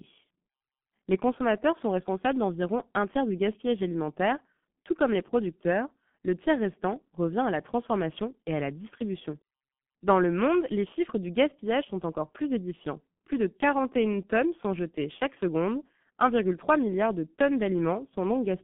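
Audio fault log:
Throughout, G.723.1 codec: speech confined to roughly 150 Hz–3.4 kHz at about 6.3 kbit/s, so it sounds muffled and hoarse, with consonants heavily smeared.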